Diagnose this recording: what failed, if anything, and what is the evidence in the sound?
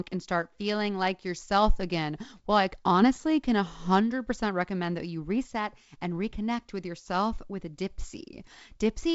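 Nothing failed: the speech carries the expected wideband telephone path, G.722-style coding with a light upper-band hiss and no content above about 7.7 kHz, and no stage from wiring through playback shows a fault.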